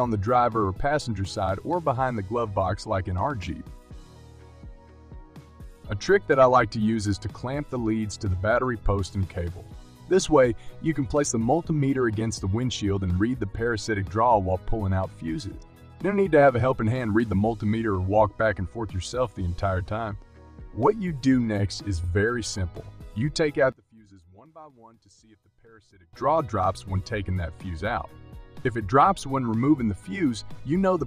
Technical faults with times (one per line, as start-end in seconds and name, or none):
23.72-26.13 one channel inverted